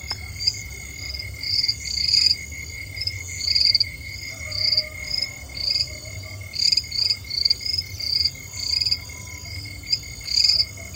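Running under the whole clip there's a switching supply whistle: a thin, high tone that wanders between about 2.92 and 3.41 kHz, centred around 3 kHz and sitting roughly 35 dB below the main sound. That's a switching power supply dropping into an audible burst mode, or two supplies beating against each other, and the pitch drift follows the load changing as the gear works.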